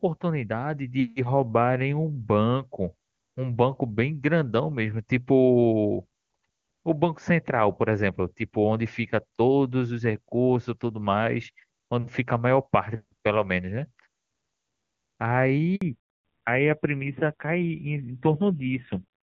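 A speech recording carried over a mobile call, clear and wideband up to 15.75 s, consistent with the AMR wideband (HD Voice) codec at a high rate, around 23.85 kbit/s. At 15.75 s there is a handover gap: the signal cuts out for 60 ms, until 15.81 s. That points to the call being passed from one network link to another, with no speech frames delivered while the connection switched over, so whatever was said in that window is simply missing. From 15.81 s to the end, the call shows a fallback to narrowband. Nothing above 4 kHz remains, so the voice becomes duller and coarser. The roughness fits a drop from wideband to the older AMR narrowband codec at a low rate, around 5.9 kbit/s, after the new link was set up.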